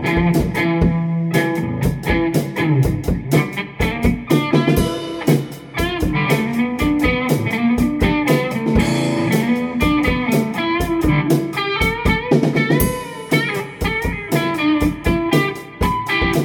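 No technical faults are audible in this audio.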